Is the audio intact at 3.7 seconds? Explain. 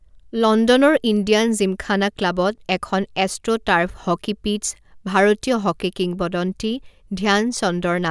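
Yes, the audio at 3.7 seconds is intact, with no dropout, click, distortion or other fault at that point.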